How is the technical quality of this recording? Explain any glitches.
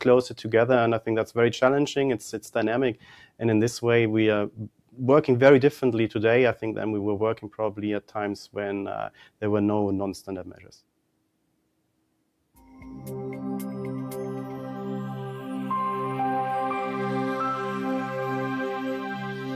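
Technical quality is compromised by speech-oriented processing. Throughout, a noise suppressor applied to music or sounds treats sustained content as noise, so levels swing by around 5 dB and held tones and tails pump and thin.

At 2.95–3.41 s, 4.51–4.99 s, 9.1–9.42 s and 10.45–10.72 s, sound is cut by the noise suppressor. It drops by up to about 12 dB, and steady or decaying parts sink while sharper onsets survive.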